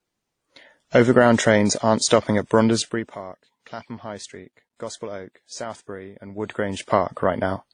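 Nothing is heard above 9.7 kHz for the whole clip. Smeared, layered codec artefacts point to transcoding between lossy codecs, likely a WMA-like stage then low-bitrate AAC-LC.

From 2.77 to 3.17 s, after "trains aren't stopping at", the level drops about 15 dB in 2 dB steps. This is zipper noise. Each unsmoothed step clicks, at roughly twenty per second.

From 6.11 to 6.96 s, the level climbs about 15 dB the same way. The zipper noise ticks more slowly here, around ten steps per second.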